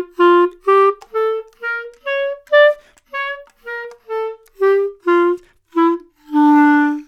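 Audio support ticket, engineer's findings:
No audible fault found in the sound on review; no component implicated and no further action required.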